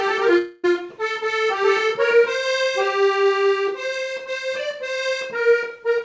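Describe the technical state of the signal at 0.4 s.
The stream most likely suffered a long network dropout from 0.38 to 0.65 s, so the receiver stretched the last sound into a buzzy, fading fill for about a quarter second. Audio then resumes with roughly 260 ms missing, band-limited to 8 kHz throughout.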